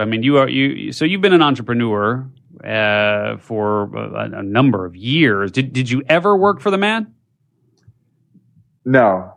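No technical faults can be heard anywhere in the recording.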